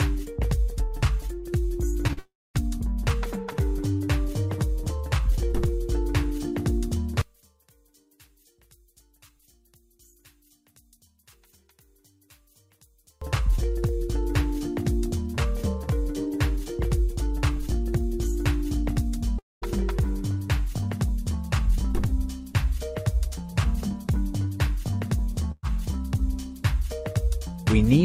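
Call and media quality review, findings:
Short concealed packet loss at 2.07 and 2.13 s: brief smears as the decoder extends the preceding sound over gaps of roughly 20 and 40 ms, then blends back.

Long network dropout, 2.19 to 2.57 s, and again 19.39 to 19.64 s: last sound stretched into a fading buzz or hiss, then about 250 and 200 ms of silence. Likely a transport stall, with the gap never played.

One channel inverted, 7.22 to 13.22 s: centred content collapses about 34 dB when summed to mono, leaving a faint difference signal. Likely a polarity flip in one stereo leg.

Burst of packet loss, 25.52 to 25.65 s: about 120 ms lost. Concealment holds the last sound and fades it, with a brief silence before audio resumes further on.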